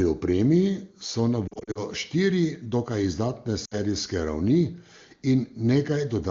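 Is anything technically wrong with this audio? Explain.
Yes. There are lost AMR speech frames in two places. From 1.48 to 1.82 s, between "opremi so na" and "štiri dokaj izdatne", short gaps of no more than 40 ms each are scattered over about 280 ms, so the speech dips and warbles in stutters. At 3.65 to 3.77 s, right after "štiri dokaj izdatne", three lost frames, 60 ms in all, make the sound dip or warble briefly. Radio errors corrupted those frames, so the decoder filled in with the last good pitch and vocal tract settings at falling gain. The wideband codec underneath sounds clean, which fits a high AMR-WB rate.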